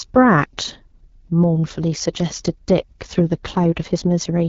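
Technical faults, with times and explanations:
Throughout, AMR wideband (HD Voice) codec: low-rate speech coding, consistent with about 8.85 kbit/s, leaves the speech rough and raspy, with nothing above 7 kHz.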